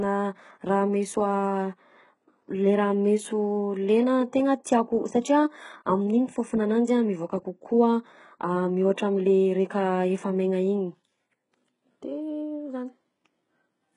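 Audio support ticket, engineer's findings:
Throughout: s sounds gritty and lispy, treble synthetic, nothing above 11.1 kHz. Likely HE-AAC v2 compression rebuilding treble from copied lower bands; heavy damage fits roughly 12 kbps.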